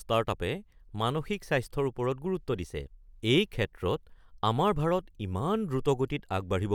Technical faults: none

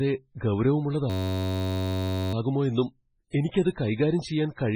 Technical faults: MP3 compression; system hang loop; pre-echo

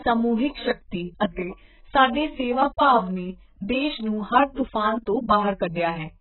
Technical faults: AAC compression

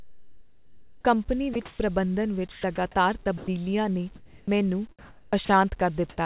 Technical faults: sound chopped by the voice detector; comfort noise in place of the background; sound dropped by the voice detector

